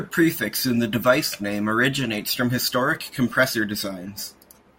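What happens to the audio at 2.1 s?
Nothing goes wrong at 2.1 s; the speech carries on intact through that moment, with no dropout, click or distortion to be heard.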